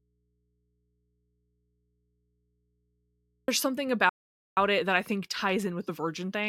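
A signal path that likely lost its wanted input while staying live accounts for the first fault in this speech recording, an audio dropout to a faint residue. The dropout is already under way when the clip begins and lasts until 3.48 s. For that stretch, the speech is absent and only mains hum from the open input remains, roughly 45 dB below normal level. The speech then returns abruptly, with none of the gradual character of a pause or fade. Next comes a playback stall, likely caused by the player running short of data or its thread being blocked. The output falls completely silent from 4.09 to 4.57 s, a gap of about 0.48 s that cuts the speech off mid-flow before it resumes. Unlike the earlier dropout, nothing at all is left in this gap, not even hum. Finally, damaged data in a compressed stream appears at 5.88 s. Part of the encoded stream is wrong, so the decoder misreads or discards the affected frame, loses sync, and has to search for the next valid header. 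The result is a short disturbance lasting under 20 ms.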